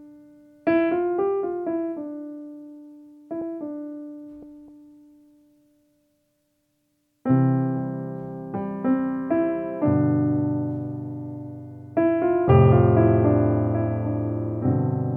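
No technical faults can be heard in the audio.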